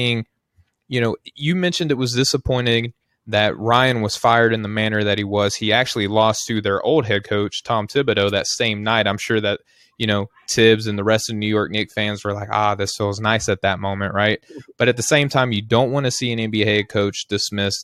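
No technical faults can be heard anywhere in the recording.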